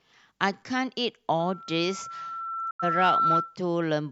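From 1.39 s to 3.57 s, loudspeaker feedback squeal: a microphone re-amplifies its own loudspeaker until the loop runs away at 1.3 kHz. The tone swells over roughly two seconds to about 5 dB above the speech, a bright horizontal line on a spectrogram.

At 2.71 s a digital broadcast dropout mutes everything, squeal included, until 2.84 s. A 3 ms fade leads into a flat-line gap in the waveform, a blank vertical band on a spectrogram, whose length points to about two lost frames.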